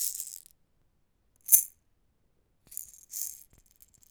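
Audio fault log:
0.27 to 3.56 s, overlapping chunks. A stutter recurs at 0.27, 0.82, 1.36, 1.91, 2.46, 3.01 and 3.56 s. At each join, about 48 ms of sound plays twice. The audio was handled in 0.5 s chunks, and each new chunk began before the previous one had finished. The repeated slice adds to the spacing, so the joins fall roughly every 0.55 s. The abrupt restart at each seam makes a click.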